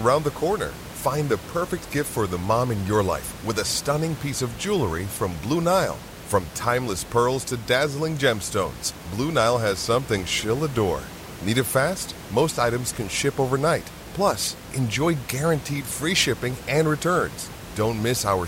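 No technical faults are audible.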